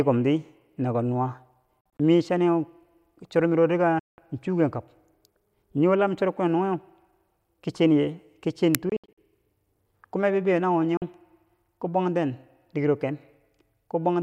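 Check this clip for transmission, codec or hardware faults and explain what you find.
Yes, there are two kinds of fault in this speech clip: repeated short silences and one brief digital crack.

Bluetooth dropout, at 1.81–2.00 s, 3.99–4.18 s, 8.89–9.18 s and 10.97–11.02 s: the audio cuts to silence in chunks of about 23 ms, likely from packets failing to reach the headphones in time. Playback resumes later in the speech, as though it had continued underneath. The first and third holes are broken up, with up to 46 ms and 70 ms missing at a stretch. The second is one solid gap of about 190 ms.

Uninitialised buffer, at 8.75 s: a 0.67 ms block was played before any audio was written into it, so leftover memory came out as a harsh digital click. It falls just before the third dropout.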